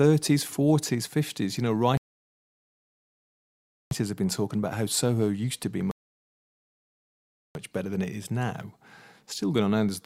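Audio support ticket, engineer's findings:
Rebuffering stall, two events. Playback buffer ran dry, player halted until more downloaded audio arrived. Speech cuts to silence, then resumes exactly where it left off. No content lost, only time added.
1.97–3.91 s: 1.94 s gap, speech picks up at "have been talking about".
5.91–7.55 s: stops after "used to be", 1.64 s silence, resumes at "better than it is".
Probable component: network delivery or client buffering.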